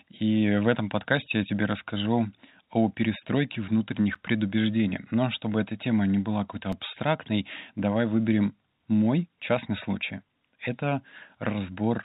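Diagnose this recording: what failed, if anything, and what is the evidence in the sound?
What failed is the driver or buffer stage, which dropped two blocks of digital silence into the speech. At 4.15 s the audio cuts out hard for about 8 ms, and at 6.72 s for about 4 ms. Both are heard as ticks because there's no fade into or out of the gaps. That looks like the output buffer not being filled in time. The telephone-band G.711 A-law coding, with nothing above 4 kHz, isn't involved in those dropouts.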